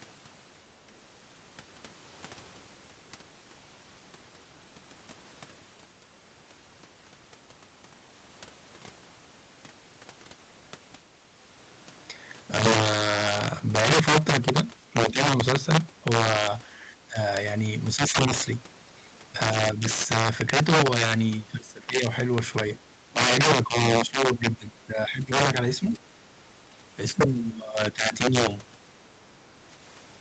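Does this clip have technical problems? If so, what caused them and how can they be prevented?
Yes. Integer overflow runs throughout: loud peaks driven about 9 dB past full scale wrap to the opposite sign, producing sharp cracks on a small fraction of samples. Prevent it with saturating arithmetic or a limiter before integer conversion.

Speech suppressed in double talk appears at 16.75–17.19, 17.96–18.17, 19.74–19.87, 21.6–22.03, 22.89–25.99 and 26.66–28.22 s. The talker dips by up to about 15 dB, likely because the echo canceller attenuated both voices during overlap. Use a canceller with better double-talk detection, or headsets.

Other side's voice leaking through is heard at 25.92–25.98 s, about 20 dB below the speech, likely as residual loudspeaker echo the canceller missed. Stronger echo cancellation or headphones would prevent it.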